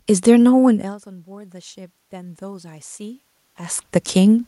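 From 0.62 s to 4.43 s there is automatic gain rising. Just before it, around half a second in, the talker moves away and the speech level at the microphone falls by about 22 dB. The gain control responds by slowly raising its gain, about 6 dB over nearly four seconds. Speech and the room noise swell together, the background lifting audibly as the voice recovers, and the ramp continues past a second change in talker distance near 3.5 s.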